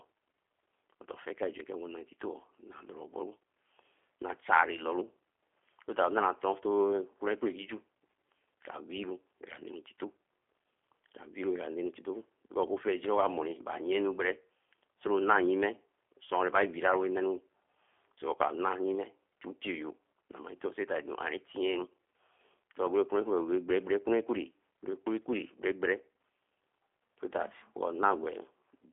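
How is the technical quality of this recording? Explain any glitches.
The quality is limited by one fault that runs the whole clip. Throughout, G.729 codec coding rebuilds speech from a filter, pitch predictor and sparse pulses, which fits 8 kbit/s. Nothing above 3.5 kHz survives. The speech sounds rough, synthetic and narrow.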